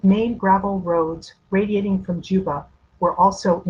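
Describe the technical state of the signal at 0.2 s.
At 0.2 s the speech signal is intact, with no dropout, distortion, glitch or other audible fault at that moment.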